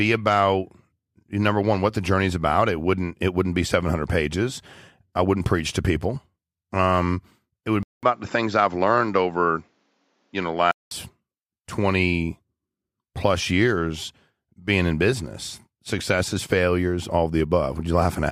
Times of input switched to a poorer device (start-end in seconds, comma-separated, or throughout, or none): 7.83-10.91